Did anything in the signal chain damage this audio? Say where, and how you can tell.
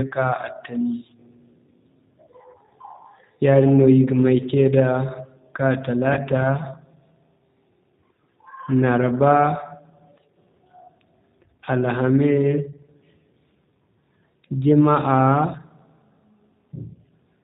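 Yes. The codec stage shows it throughout: G.729 coding, which sounds like about 8 kbit/s, leaves the speech plainly rough and synthetic with nothing above 4 kHz. It's rebuilding each 10 ms frame from a vocal tract filter, pitch predictor and a few pulses.

Then on the network side there's VoIP packet loss concealed by the speech codec at 6.14 to 6.20 s. About 30 ms went missing, consistent with a single lost packet. The decoder extrapolated from its last frame with falling gain to fill the gap, and the damage trails on briefly after.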